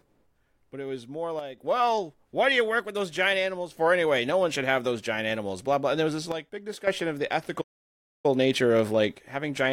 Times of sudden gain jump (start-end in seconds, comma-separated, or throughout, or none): 1.39-1.58, 6.32-6.87